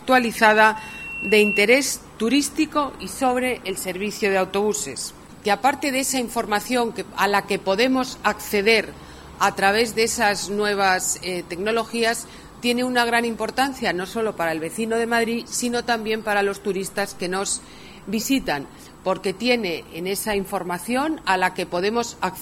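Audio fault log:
0.75 to 1.65 s, loudspeaker feedback squeal: a single tone at 2.7 kHz swells out of nowhere, climbing for the better part of a second until it sits roughly 5 dB above the rest of the sound, then cuts off. The mic is hearing its own loudspeaker, and at that one frequency the loop's gain tops one, so each pass round the loop makes the tone louder until the loop gets broken.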